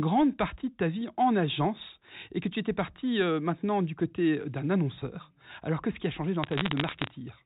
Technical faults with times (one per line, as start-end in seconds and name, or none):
6.44-7.07 bit errors on a digital phone line